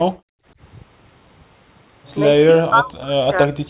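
From 0.17 to 0.47 s the room background is gated by the echo canceller. While the far-end loudspeaker was playing, the canceller clamped the microphone down, pulling the ambient floor by about 40 dB for roughly a third of a second before releasing it. The room sound briefly vanishes and then snaps back. On a waveform the noise floor thins to a near-flat line. On a spectrogram a vertical band goes dark across all frequencies up to the 4 kHz ceiling of the narrowband call path.

Later the speech itself is pulled down, in two stretches: 2.45 to 3.16 s and 3.32 to 3.69 s. This is likely speech suppressed in double talk. With both sides talking at once, the canceller could not tell the local talker from loudspeaker echo and attenuated everything, by as much as around 35 dB. Within the first span about half a second is affected, and within the second a fifth of a second. The voice dips, dulls and breaks into fragments. 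The waveform shows the envelope chopped into shrunken pieces. The spectrogram shows harmonics fading and gapping, with the upper bands thinning.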